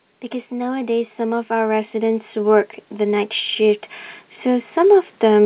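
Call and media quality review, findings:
Automatic gain rising, 0.07–3.88 s: AGC ramps level about 7 dB; background swells with the speech, unlike a talker getting louder. Nothing above 4 kHz, which fits G.711 A-law.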